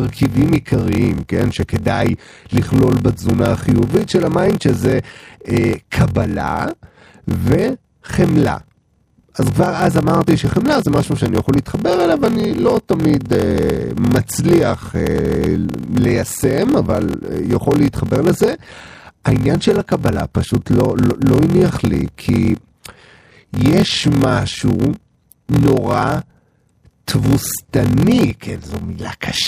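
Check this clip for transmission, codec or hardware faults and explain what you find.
There is one fault, present for the whole clip. The speech carries a steady 43.1 Hz buzz and plays slower than it should, at 0.861 times normal speed, with timbre unchanged. This is a padded block size mismatch. One stage writes shorter blocks than the next reads, which fits a 1024-sample read block, so zeros fill each remainder and insert regular gaps.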